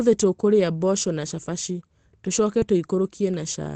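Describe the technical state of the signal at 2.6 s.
Around 2.6 s there is a short concealed packet loss from 2.59 to 2.63 s. About 20 ms of the call arrived too late for the decoder, which extended the preceding sound for roughly 18 ms, then crossfaded back into the real signal. It registers as a brief smear or wobble. On a spectrogram the spectrum runs on unchanged across the gap, continuing the sound that came just before it.

Overlapping its end, from 2.61 to 2.63 s, is a lost packet rebuilt from error correction. One 20 ms packet went missing, and the decoder replaced it with the lower-quality duplicate carried in the next packet, the in-band forward error correction of this Opus stream. The rebuilt 20 ms sounds rougher and grainier than the audio around it. A spectrogram shows a short band of extra noise filling the spaces between harmonics, and the waveform looks fuzzier before the normal signal resumes.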